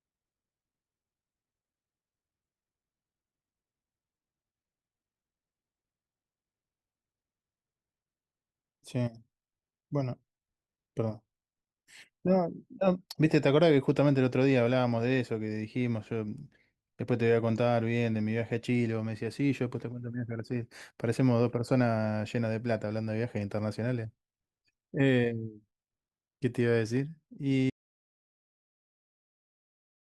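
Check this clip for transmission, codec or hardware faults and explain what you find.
Two faults are present in this speech clip.

From 0.0 to 4.0 s the adaptive stream starts at a low bitrate: the player begins on a coarse version before switching up. The opening sounds dull and smeared, consistent with roughly 24 kbit/s Opus, then abruptly clears, fitting a step to around 64 kbit/s. A spectrogram shows the high-frequency band sparse or filled in until 4.0 s, then suddenly dense, with no gap in the waveform.

At 27.7 s there is an audio dropout to silence lasting to the end. The speech cuts off mid-flow into silence with no room tone, likely from a lost input or link while writing continued. The waveform flattens to a straight line; the spectrogram goes blank.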